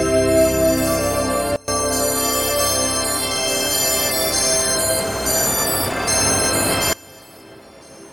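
At 1.56 s the level drops by about 24 dB until 1.68 s, then again from 6.93 s to the end: a sudden gain jump, likely an unramped gain change.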